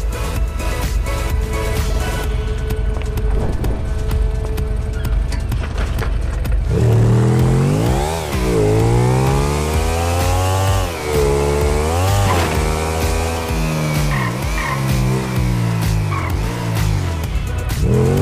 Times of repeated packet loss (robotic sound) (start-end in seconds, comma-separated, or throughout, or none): none